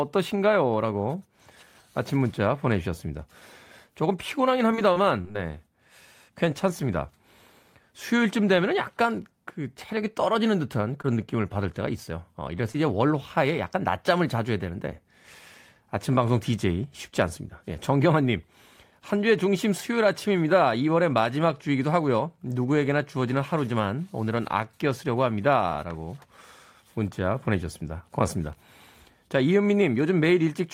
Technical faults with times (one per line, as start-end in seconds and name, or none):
4.71-5.37 repeated packet loss (robotic sound)
11.02-11.06 short concealed packet loss
12.72-12.76 short concealed packet loss